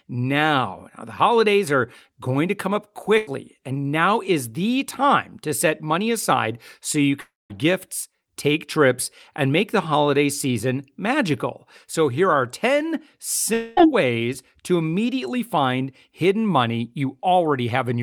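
Burst of packet loss at 3.17 to 3.29 s: about 100 ms of speech never arrived in time, so the receiver stretched the preceding sound across the gap while fading it down. The result is a brief smeared, dying tail before the speech resumes slightly further on.

Long network dropouts, likely the cause of two longer gaps, occur at 7.21 to 7.52 s and 13.54 to 13.79 s. Roughly 300 ms and 240 ms are lost. At 7.21 s the held sound fades within about a tenth of a second and then falls to silence for about 190 ms. At 13.54 s the fading fill covers the whole gap.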